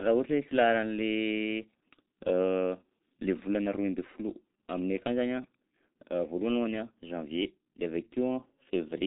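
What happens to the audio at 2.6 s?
At 2.6 s the speech is going through the G.723.1 codec, as it does for the whole clip. Nothing survives above 3.8 kHz, and the coarse, 30 ms frame-by-frame voice model leaves the speech muffled and hoarse, with smeared consonants. The heavy damage fits a bitrate of about 6 kbit/s. A simple low-pass filter would dull the speech in the same way but leave it clean. The hoarseness and blurred consonants mark this as a low-rate speech codec.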